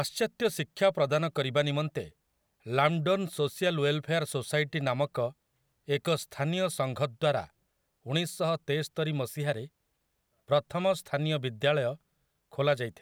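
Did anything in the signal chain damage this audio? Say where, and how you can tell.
No, nothing in the signal chain damaged this speech.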